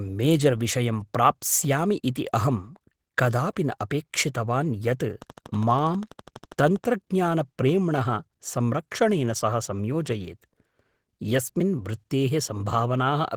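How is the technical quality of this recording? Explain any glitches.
The recording has two faults: low-bitrate codec damage throughout and a short burst of clicks.

Opus voice compression runs the whole length. A speech coder squeezed to roughly 16 kbps with 20 ms frames splits the band, with linear prediction below 8 kHz and a transform layer above. Coarse excitation coding leaves the speech plainly muffled, hoarse and faintly robotic, though the band still reaches about 20 kHz.

A train of clicks runs from 5.22 to 6.85 s, most likely from interference or a faulty connection. It injects about twenty near-identical pulses at a regular 12.3 per second. They peak roughly as loud as the speech and are heard as steady ticking.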